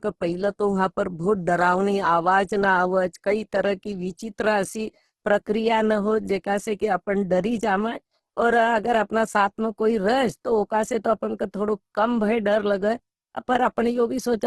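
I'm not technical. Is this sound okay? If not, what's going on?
No. From start to finish the speech sounds rough and grainy, and everything above about 12 kHz is missing, so it lacks crispness. This is likely Opus compression squeezed hard. Unlike MP3 damage, it swirls and warbles less; it turns gritty instead.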